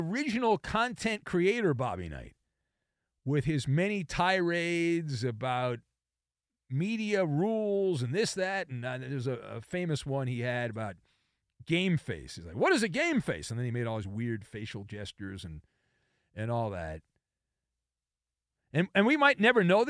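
A speech recording with nothing technically wrong to point to.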